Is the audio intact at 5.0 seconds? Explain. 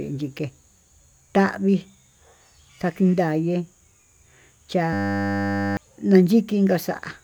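No. From 4.93 to 5.77 s a system hang loop replaces the speech: the driver stalled while the hardware kept replaying one 10 ms stretch of its buffer, producing a steady 100 Hz buzz, with roughly a second of audio lost.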